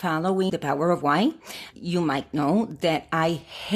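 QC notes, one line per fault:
0.49–0.51 s, broken MP3 bit reservoir: a 28 ms glitch as the speech skips ahead, likely from frames lost after a cut, so the next frame borrows stray bytes; the length fits one 26.1 ms frame. Waveform shows an abrupt discontinuity.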